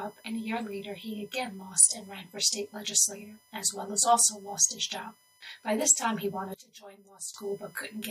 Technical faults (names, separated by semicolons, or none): USB whine; one channel inverted